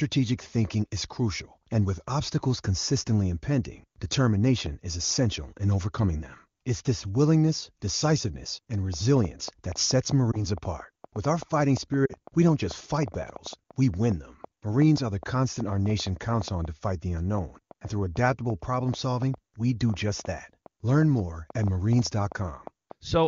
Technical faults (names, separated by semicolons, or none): train of clicks; lost AMR speech frames